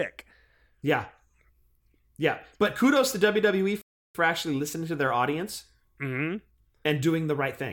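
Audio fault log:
3.82–4.15 s: playback stall. The speech cuts off mid-flow into about 0.33 s of silence, then carries on from where it stopped. This most likely comes from the player running out of buffered data, or from its output thread being held up.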